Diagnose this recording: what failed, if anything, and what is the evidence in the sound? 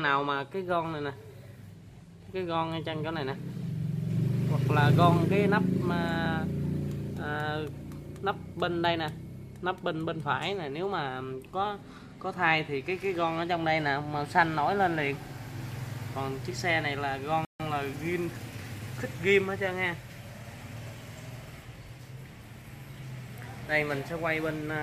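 At 17.45 s the audio drops to complete silence for 148 ms, resuming at 17.6 s. The stage is the wireless playback link, with a likely Bluetooth stall: delayed packets drained the headphones' buffer, halting output until retransmitted data arrived.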